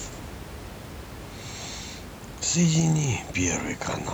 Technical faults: none

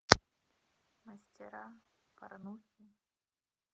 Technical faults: short stall from a late packet

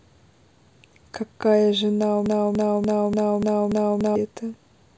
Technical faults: broken-record loop

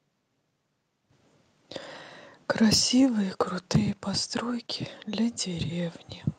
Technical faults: microphone overload; microphone volume stepped down

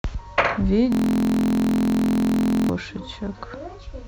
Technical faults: system hang loop

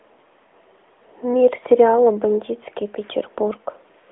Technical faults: none

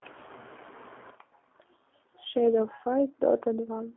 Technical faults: G.729 codec

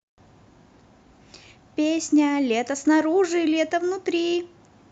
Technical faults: none

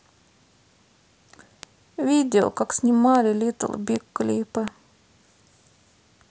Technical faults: bit error spike

